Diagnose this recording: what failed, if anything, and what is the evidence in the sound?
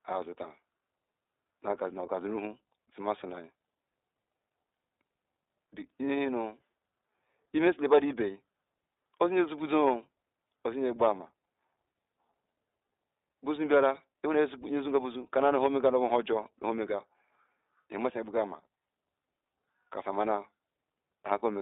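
The codec stage failed. The speech is band-limited throughout to roughly 300 Hz to 3.7 kHz, with a plainly rough, synthetic texture. That is the iLBC codec coding each 20 ms frame's excitation independently, and the damage fits its 15.2 kbps mode.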